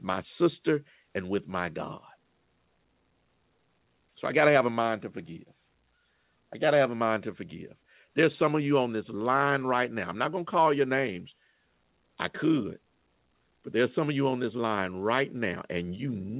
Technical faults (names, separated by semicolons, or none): none